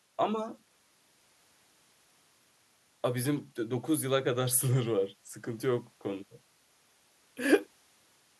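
No technical faults are audible.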